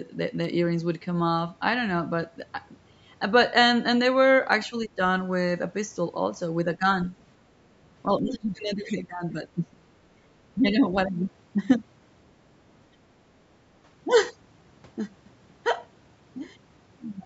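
Right at 0.44 s there's a tiny, sharp click, and the same thing comes back at 2.40, 4.53 and 8.19 s. Each is a single hairline tick with nothing audibly missing around it, most likely dropped samples, where just a handful of samples go missing and the waveform jumps.

From 4.69 to 5.0 s the speech sags hard, down by about 20 dB. There's a lighter dip, about 5 dB, at 6.79 to 6.86 s, then about 10 dB from 8.06 to 8.48 s. The longest stretch runs 8.67 to 9.84 s, where the talker drops away by about 20 dB. That pattern is likely speech suppressed in double talk: the echo canceller can't pull the talker apart from the far end while both are going, so it turns everything down.

Inside that, at 8.33 to 8.39 s, a faint scrap of another voice pokes through, sitting about 30 dB under the speech. It sounds like the other side's voice leaking through, loudspeaker playback the canceller didn't fully scrub out of the microphone, and it likely comes from the same moment of crosstalk.

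Finally, at 10.12 to 10.25 s the room sound briefly ducks by about 9 dB and then recovers. That's background gated by the echo canceller, which clamped the microphone down while the loudspeaker was active and released it a moment later.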